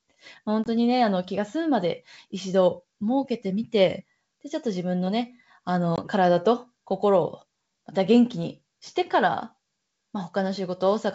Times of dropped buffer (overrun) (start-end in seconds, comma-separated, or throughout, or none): none